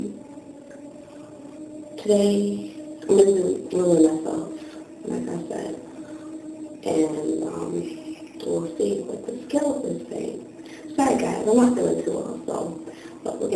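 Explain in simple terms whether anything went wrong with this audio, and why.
Nothing went wrong here: no fault can be heard anywhere in the recording.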